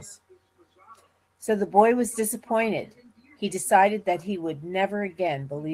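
No technical faults are audible.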